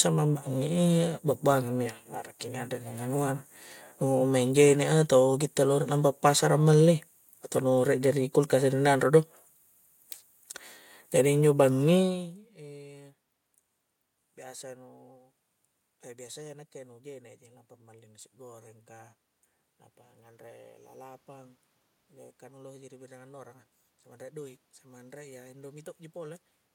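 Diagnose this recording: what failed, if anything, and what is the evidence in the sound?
Nothing failed; no stage of the chain shows a fault.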